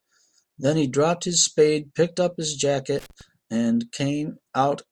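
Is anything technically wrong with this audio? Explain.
Yes. From 2.99 to 3.21 s the speech is broken by loose connector crackle, a brief irregular burst of crackle and scratching lasting about 0.23 s. A worn or dirty contact somewhere in the signal path is making and breaking as it shifts, so the audio is chopped on and off in rapid, uneven bursts. On a waveform this shows as jagged dropouts and spiky transients. A spectrogram shows scattered broadband vertical streaks across that short span.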